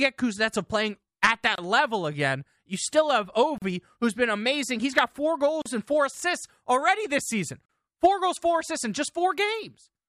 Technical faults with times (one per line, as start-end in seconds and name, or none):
1.55-1.58 gap at a join of encoded pieces
3.58-3.62 gap at a join of encoded pieces
5.62-5.66 gap at a join of encoded pieces
7.66-7.69 gap at a join of encoded pieces